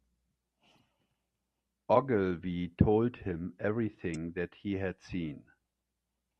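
A short glitch, a chirp, squawk, click or brief hole, cuts into the speech at 0.76 to 0.78 s and again at 4.12 to 4.16 s. Both come from damaged data in a compressed stream: corrupted bytes make the decoder misread those frames and lose sync until it finds the next valid frame header.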